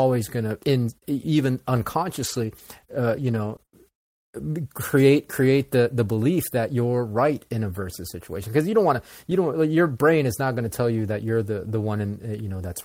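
Brief ticks and small smears break into the speech from 2.19 to 3.72 s, just after "gonna in even". These are scattered short gaps: about seven lost or late packets, none longer than roughly 20 ms, totalling 100 ms missing. The receiver bridged each by extending the preceding sound, reshaping about 420 ms of audio.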